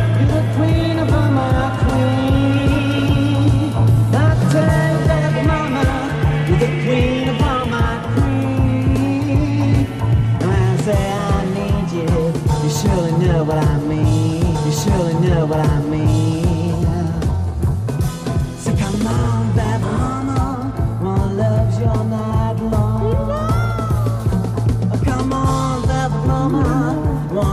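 A stream segment repeated at 14.54 s: roughly 2 s of audio, running to 16.56 s, plays a second time after a small blip at the jump back, because the player fetched or queued the same segment twice and replayed it.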